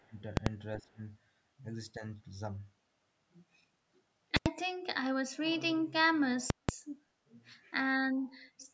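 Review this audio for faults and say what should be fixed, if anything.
Speech suppressed in double talk appears at 0.0–0.16 s, 0.77–1.0 s and 1.98–2.02 s, with level drops of up to roughly 25 dB, the last one slight. The likely cause is the echo canceller mistaking both sides talking at once for echo and attenuating everything. A spectrogram shows brief faded or hollowed patches; the waveform shows the envelope sagging. Better double-talk detection, or gentler suppression when both ends are active, would prevent this.

Invalid numbers at full scale occur at 0.37–0.46 s and 4.37–4.46 s (each 93 ms, which fits a 4096-sample block) and at 6.50–6.69 s (186 ms, which fits an 8192-sample block). A calculation yielded infinite or invalid values that were clamped to the maximum, so each block is heard as a loud pop at either edge with nothing between. The waveform shows flat rails pinned at one extreme, far beyond the speech peaks, and the spectrogram shows bright vertical lines at the edges. 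Checking for invalid values and replacing or muting them before output would prevent this.

An echo leak appears at 8.3–8.68 s as a faint delayed copy of the speech, about 35 dB below it and 381 ms late. The likely cause is the loudspeaker side's echo canceller letting some of its loudspeaker pickup through. A spectrogram shows weak repeated harmonic traces offset in time. Better echo canceller convergence, or headphones on the loudspeaker side, would prevent it.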